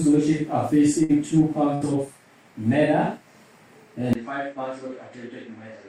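The audio has two short bursts of packet loss, at 1.03 to 1.12 s and 1.75 to 1.84 s. In each, the last sound is stretched for about 55 and 63 ms and fades out. Playback then resumes with about 60 ms skipped. From 4.13 s to the end, the sound changes abruptly. A 20 ms silence comes first. Then nothing is heard above 8.3 kHz, the level falls by about 10 dB, and a new faint background noise appears well below the signal. This likely comes from the input switching to a poorer device.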